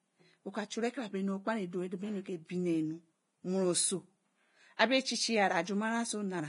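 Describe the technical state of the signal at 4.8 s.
Pre-echo runs from 4.77 to 4.79 s: a short hiss about 27 ms long sits just ahead of a sharp speech onset. Quantisation noise meant for the loud attack has spread back across the quiet start of the same transform block. On a spectrogram it shows as a thin broadband smear before the onset. In the waveform it appears as low-level noise in place of a clean, silent lead-in, and the attack itself sounds softened.

Throughout, including here, the speech is grainy and hissy, and nothing is present above 10.6 kHz. This is likely heavy Vorbis compression, at a rate that points to roughly 29 kbps. The spectrogram shows a hard ceiling at 10.6 kHz and speckled, noisy treble below it where fine detail has been replaced by noise.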